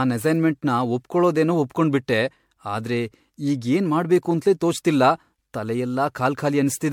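Throughout the speech, the sound is swirly, smeared and hollow, and consonant attacks blur. This points to generation loss, likely from around seven passes through an MP3 encoder near 96 kbit/s. Each pass requantises, so noise and spectral holes pile up. Nothing remains above 19.9 kHz.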